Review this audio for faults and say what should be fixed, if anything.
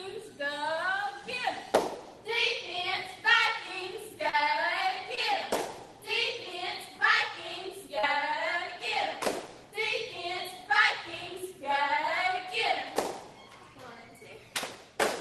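Short concealed packet loss occurs at 4.29–4.35 s, 5.15–5.19 s and 7.99–8.05 s. Roughly 40 ms, 20 ms and 40 ms of audio arrived too late, and the receiver extended the preceding sound before blending back. This gives brief smears rather than the hard silent gaps of an unconcealed dropout. A deeper jitter buffer or forward error correction on the link would prevent it. The call path itself, whose band limit near 12 kHz points to Opus at about 20 kbps, is not at fault.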